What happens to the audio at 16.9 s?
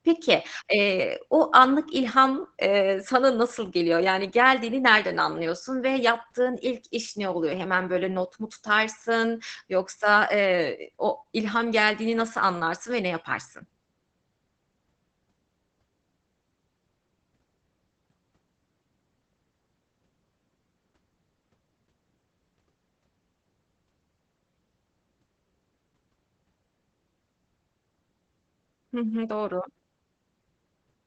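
At 16.9 s the speech is passing through Opus voice compression, as it does for the whole clip. The coder is running in its SILK linear-prediction mode with a wideband limit, and the sound points to a low bitrate of around 12 kbps. Nothing remains above 8.8 kHz, and the excitation is coded coarsely, so the voice comes out muffled and hoarse, with a faint robotic edge and plainly audible codec damage.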